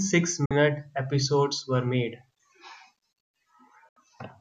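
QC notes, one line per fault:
0.46–0.51 s, digital broadcast dropout: the speech fades out within 3 ms and stays muted until "episodes were made". The 48 ms hole, consistent with two lost frames, shows as a flat waveform gap and a blank spectrogram column.
3.89–3.97 s, digital broadcast dropout: the receiver mutes again with a 3 ms fade, and 72 ms of speech is gone, fitting three lost frames. The waveform flatlines and the spectrogram shows a clean vertical gap.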